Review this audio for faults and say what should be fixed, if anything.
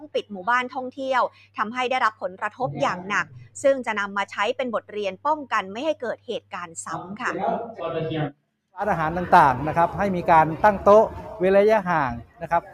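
Throughout, held parts and decaying tails sink while sharp onsets come through, so the level pumps and flutters by around 10 dB. This is a noise suppressor applied to music or sounds: a speech-tuned suppressor mistakes steady tones and ambience for noise and turns them down.

Deeper dips occur at 0.01–0.32 s, 1.29–1.58 s, 3.24–3.58 s, 6.16–6.77 s and 12.2 s to the end, each dropping by about 16 to 18 dB. Here sound was cut by the noise suppressor, which judged these stretches as noise and attenuated them harder.

To prevent this, disable speech noise suppression for this path or switch it to a music or original-sound mode before recording.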